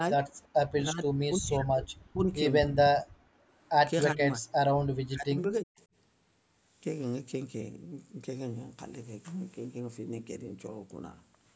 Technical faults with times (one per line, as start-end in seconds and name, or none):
0.00-0.24 speech suppressed in double talk
0.43-0.47 echo leak
0.76-2.31 speech suppressed in double talk
3.05-3.49 background gated by the echo canceller
4.12-4.46 speech suppressed in double talk
4.98-5.80 speech suppressed in double talk